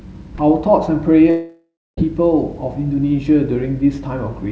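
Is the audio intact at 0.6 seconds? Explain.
Yes, the audio is intact at 0.6 seconds, with only the band limit of the call path, which has nothing above 8 kHz as expected of a G.722 call.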